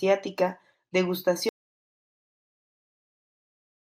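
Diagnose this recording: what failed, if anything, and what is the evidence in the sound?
The speech cuts off abruptly at 1.49 s and the rest of the recording is silence, with no room tone, through to the end. This is an audio dropout to silence, likely an input loss at the capture stage while the recorder kept writing silence.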